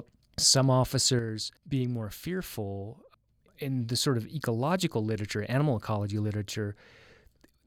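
From 1.19 s to the end of the clip, one stereo channel likely drops out, so only one side keeps feeding the mono sum. This is a one channel drops out fault: the speech shared by both channels suddenly falls by about 6 dB at that moment and stays lower, but is otherwise unchanged. Anything carried only in the missing channel vanishes outright.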